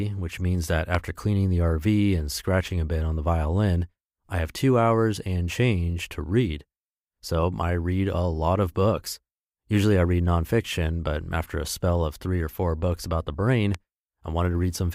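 A speech clip with two loud pops, at 0.95 to 0.97 s and 13.75 to 13.77 s. Each is a single sharp click riding roughly 15 dB and 10 dB over the speech, which carries on underneath. The likely cause is a stray voltage spike from a plug, switch or static discharge.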